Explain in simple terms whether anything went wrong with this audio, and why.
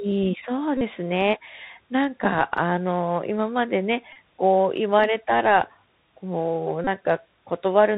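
Bluetooth CVSD headset codec, throughout the clip: the speech went through the basic Bluetooth headset codec, which nudges the signal up or down one small step at a time. Nothing above 4 kHz survives, so the speech sounds dull and phone-like, s sounds turn scratchy, and a grainy hiss sits underneath.

Bluetooth headset packet repeated, at 0.77 to 0.82 s, 4.13 to 4.17 s and 6.84 to 6.88 s: short bursts of voice data between headset and phone went missing, and the last good piece was played again and again. The rapid repeating turns each gap into a brief buzz, about 40 ms long at first and about 30 ms later.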